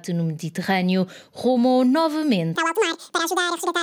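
From about 2.55 s to the end at 3.83 s, the audio gets read two samples at a time, so it plays at double speed and jumps a full octave, 12 semitones, up. Pairs of samples are being treated as single frames.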